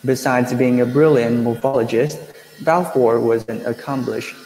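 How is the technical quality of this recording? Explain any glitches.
The recording suffers from network packet loss in several places, which affects the speech in three distinct ways.

From 1.53 to 2.35 s, just after "being a brilliant", there is repeated packet loss (robotic sound). There were four gaps, with the longest gap 60 ms, and the receiver stretched the previous sound across them. The speech turns choppy and robotic, with about 120 ms missing.

From 3.41 to 3.50 s, a burst of packet loss cut the stream. The decoder held the last sound for 65 ms while fading it, so a buzz or hiss is heard before the speech resumes with about 60 ms gone.

At 2.95 to 2.97, 3.48 to 3.50, 3.54 to 3.56 and 4.06 to 4.08 s, each lost packet was rebuilt from error correction. A low-bitrate copy carried in the following packet filled each 20 ms slot. There is no gap, but those moments sound briefly rougher and noisier.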